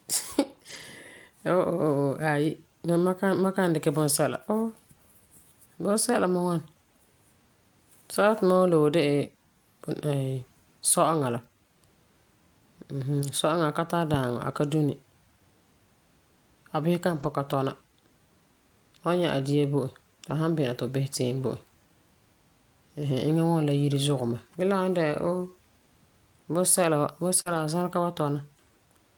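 At 0.69 to 0.83 s, 13.19 s, 17.11 to 17.29 s and 20.25 to 20.31 s, lost packets were rebuilt from error correction. The decoder played low-bitrate copies carried in the following packets, so nothing drops out, but the speech turns briefly rough and noisy. On a spectrogram these stretches show grainier, less defined harmonics. The waveform has no gap.

At 27.41 to 27.48 s, a short concealed packet loss leaves about 40 ms missing. The decoder continues the previous sound and then blends back, which produces a brief smear or wobble. From 27.46 to 27.60 s, 80 ms more is rebuilt from error correction and sounds rough in the same way.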